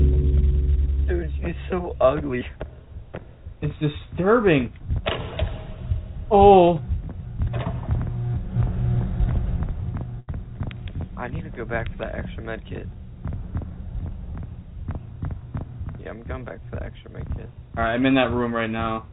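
At about 2.41 s there's a quick skip where the audio jumps forward with no silence in between, as if roughly 50 ms just dropped out and the two sides got stitched together. It sounds like a small hiccup. It's likely audio missing between chunks, where the recorder or processor loses a sliver of sound while closing one block and opening the next.

Then from 10.2 to 10.3 s there's a burst of packet loss. About 80 ms of audio never arrived, and the receiver papered over 77 ms of that by stretching out the last sound it had and fading it down, so you hear a brief held buzz or fading hiss instead of what should be there. After that, playback picks up further along, with that stretch simply gone. Through all of this the call path itself comes across band-limited, with nothing above 4 kHz, which points to a G.711 A-law call at 64 kbps.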